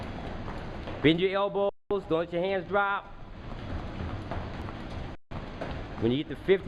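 The audio drops to silence twice, at 1.69 s for about 0.21 s and at 5.15 s for about 0.16 s, then resumes. Each gap is likely a Bluetooth stall, where held-up packets let the receiver's buffer run dry until retransmissions arrived.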